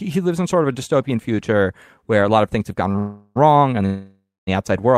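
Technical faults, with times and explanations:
2.91–2.96 s, short stall from a late packet: just after "of things have gone", a late packet left the jitter buffer empty, so the last sound is held about 30 ms before continuing.
2.98–3.38 s, call audio freeze: after "of things have gone", a fading continuation fills 0.37 s, likely from packets held up in transit; the speech then resumes intact, only delayed.
3.86–4.49 s, call audio freeze: the held sound fades out and then stays silent for about 0.23 s, filling 0.62 s in all, likely from delayed packets, before the speech resumes where it stopped.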